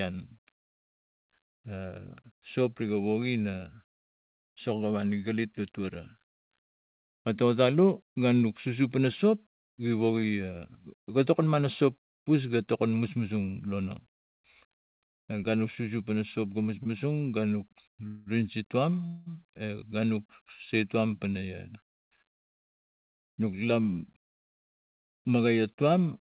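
It's a speech clip that's come through a call path; the band stops dead at 4 kHz, which fits G.711 mu-law at 64 kbps. The first glitch is a short stall from a late packet at 16.83 to 16.87 s. A packet didn't arrive in time and the jitter buffer ran dry, so the receiver held the last bit of sound for about 22 ms until the packet turned up, then carried on. You hear a tiny smear or buzz, and nothing is actually lost. Then there are two call audio freezes, at 18.07 to 18.28 s and 19.06 to 19.28 s. In each one the sound hangs on a fading buzzy continuation of the last moment for roughly 190 ms and then 200 ms, without dropping to silence, and then picks up exactly where it left off. The likely cause is packets getting held up in transit and the buffer emptying, so the receiver padded the gap rather than dropping anything. Each freeze adds delay instead of removing content. Finally there's a jitter buffer speed-up from 21.14 to 23.80 s. 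The buffer was holding more audio than it wanted, so the receiver trimmed lots of pitch-period-sized slivers in a row, about a fifth of a second in total. The speech runs at about 107% speed at the same pitch and comes across a bit rushed.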